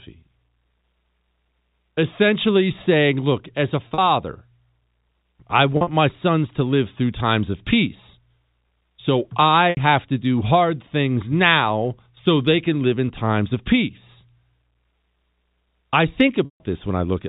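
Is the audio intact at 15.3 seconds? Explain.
Yes, the audio is intact at 15.3 seconds, with nothing breaking into the speech there beyond the narrow telephone band of its G.711 coding.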